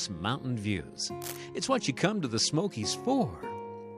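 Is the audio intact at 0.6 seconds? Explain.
Yes, the audio is intact at 0.6 seconds, with no audible fault at that point.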